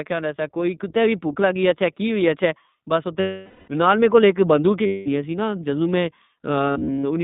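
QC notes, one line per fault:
throughout: iLBC codec. The speech is squeezed into a narrowband line of about 150 Hz to 3.7 kHz, with each short frame coded independently at a low rate. This fits the 15.2 kbps mode with 20 ms frames. The result is plainly audible roughness, a slightly synthetic edge, and no air above 3.7 kHz.
3.20–3.70 s: lost iLBC frames. About 480 ms of packets went missing, and the decoder filled the gap by repeating the last pitch cycle mixed with noise, fading as the loss dragged on. It is heard as a held, buzzy vowel before "نال میکول اک بندوک", and the voice is right again almost at once.
4.86–5.08 s: lost iLBC frames. A 200 ms loss falls between "نال میکول اک بندوک" and "سی نا جدو میں". The concealment sustains a short breathy, buzzy tone in place of the missing audio, and since each frame stands alone, recovery is immediate.
6.72–7.05 s: lost iLBC frames. Here 200 ms of losses are scattered across 320 ms in brief runs, the longest only a few tens of milliseconds. 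The repeated-pitch fill therefore pops in and out, leaving a stuttering, slightly buzzy texture rather than one held tone.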